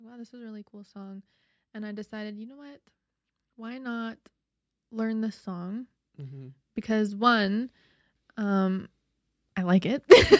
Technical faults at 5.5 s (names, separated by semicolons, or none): automatic gain rising